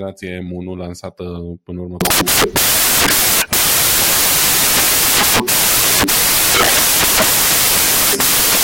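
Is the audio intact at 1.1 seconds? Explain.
Yes, at 1.1 seconds the speech plays through cleanly, with no dropout, click, distortion or other fault at that moment.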